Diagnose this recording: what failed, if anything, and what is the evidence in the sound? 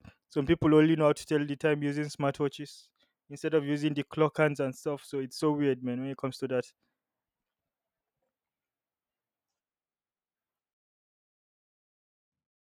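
At 10.74 s the speech abruptly turns roomy and hollow, loses bass, and drops by roughly 10 dB, staying that way to the end. A room-noise floor around 35 dB below the speech becomes audible. This points to a switch to a distant microphone at the capture stage, likely because the close microphone's feed failed. On a waveform the envelope steps down sharply. A spectrogram shows thinned low frequencies, smeared reverberant tails and a raised noise floor.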